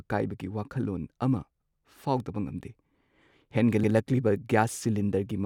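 Chunks of the speech overlap at their joins: each new 2-second chunk begins about 100 ms before the previous one finished, so that stretch of audio plays twice. The first join, right after "ꯀꯥꯏꯕꯒꯤ ꯋꯥꯈꯜꯂꯣꯟ ꯑꯃ", falls from 1.74 to 1.84 s, and the next comes two seconds later at 3.84 to 3.94 s. Each is heard as a brief stutter or click at the seam, recurring at that steady two-second spacing.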